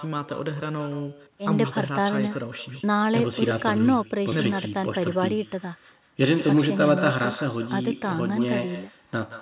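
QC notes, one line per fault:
Throughout, echo with no canceller: every phrase is followed, roughly 150 ms later, by a copy about 14 dB quieter and thinner, because the far end's loudspeaker feeds its microphone and nothing subtracts that return before it travels back. Unlike room reverberation, the shadow is a distinct delayed repeat rather than a smooth decay, and like the main signal it stops at 4 kHz, which fits narrowband G.711-style call coding.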